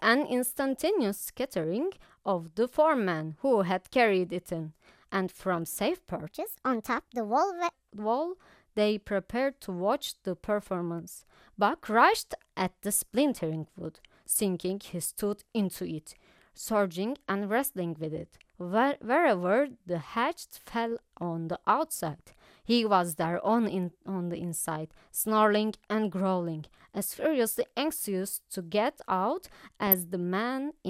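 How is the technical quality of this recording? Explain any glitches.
The recording has two audible glitches: a short stretch that runs too fast and a brief burst of digital corruption near the end.

Section at the wrong speed, 6.27 to 7.73 s: this stretch plays 1.31 times faster, likely because it was fitted to the wrong clock during editing or playback. Speed and pitch rise together, so the speech turns hurried and about five semitones higher before snapping back.

DAB burbling, 29.87 to 29.99 s: weak reception let a small fraction of bit errors slip past error correction into the MP2 audio data. Wrong samples put short blips of noise into individual sub-bands across about five damaged frames, producing brief noisy blips over the speech.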